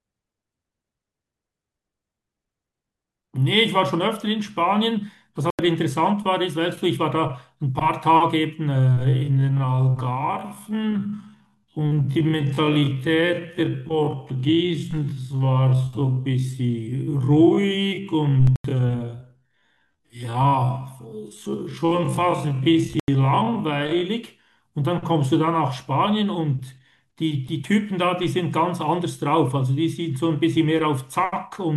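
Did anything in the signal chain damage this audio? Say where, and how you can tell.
Yes, in three ways, all at the storage, codec or processing end rather than in the analogue path.

The first is corrupt frames muted by the decoder. Abrupt holes of silence appear at 5.50–5.66 s, 18.40–18.64 s and 22.93–23.08 s, each lasting about 0.15 to 0.24 s, which fits two or three dropped codec frames at a time. Flipped bits made those compressed frames undecodable, so playback put silence in their place. The audio resumes on time after each gap, with no shift in timing, which is consistent with frames being muted rather than lost.

The second is a time-stretched section from 8.79 s to 24.05 s. Over that span the pace abruptly drops to roughly half speed, a factor of 0.525, while the pitch stays where it was. This is how software behaves when it lengthens audio by repeating short pieces to keep the pitch. 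The likely cause is a processing step that stretched the section to fit a target duration.

The third is a corrupt FLAC frame at 14.91–14.98 s, inside the stretched section. It produces a short error lasting about 68 ms that peaks at about −30 dBFS. Flipped bits in the losslessly compressed data threw the decoder's prediction onto wrong values from the damaged bit onward, and the decoder did not catch this with its checksum. The next intact frame decodes cleanly, so the damage stays confined to that brief span.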